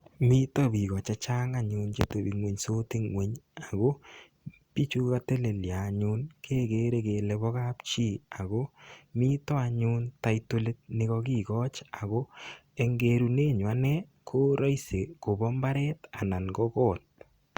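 Nothing stood out as a technical problem anywhere in the speech on listening.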